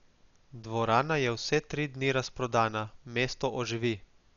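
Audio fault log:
Throughout: Dolby Digital compression, heavy, with nothing above about 6.9 kHz, so the speech sounds dull and boxed in. The damage fits a low bitrate near 48 kbps. The encoder likely narrowed the band and left many frequency lines with no mantissa bits, and the decoder filled those gaps with dither noise. That substituted noise gives a rough, fluttering texture around the voiced tones, and the missing top end removes sibilant detail.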